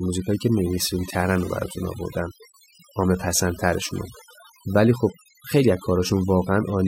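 Throughout the speech, a noise reduction stage set far too aggressively produces overdone noise removal, cutting individual frequency bands down or out whenever they sit near its noise estimate. Quieter parts of the voice vanish with the noise, so pauses fall to near silence with twinkling specks.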